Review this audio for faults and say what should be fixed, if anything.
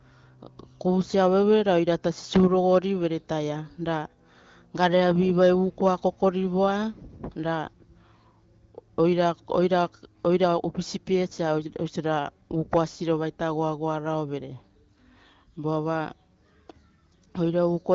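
Nothing in this audio needs to be fixed, as I found no faults.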